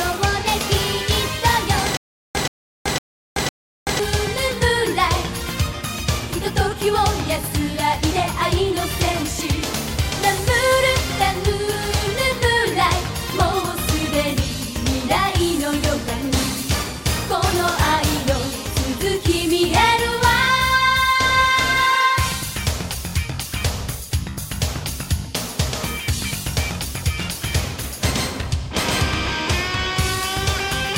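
From 1.97 s to 4.0 s the audio breaks into a stutter with silent gaps: a 127 ms fragment repeats four times, each followed by about 380 ms of digital silence, every 507 ms. Likely a stalled player retrying its last buffer, losing the intervening audio.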